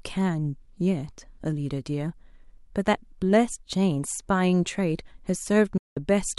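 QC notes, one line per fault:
5.77–5.97 s, Bluetooth dropout: the speech cuts to silence for about 186 ms, then resumes partway along rather than where it stopped, as though the audio kept running through the gap. The likely cause is wireless packets arriving too late at the headphones and being discarded, leaving the output empty until valid data returned; a hole of this length fits roughly eight lost packets.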